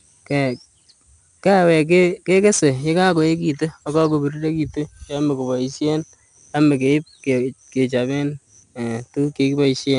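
4-bit ADPCM compression runs through the whole speech clip. Each sample is coded as a coarse step from a prediction, leaving a gritty hiss that rides on every loud syllable. Nothing reaches above 10.7 kHz. This dull top end fits a rate near 89 kbps.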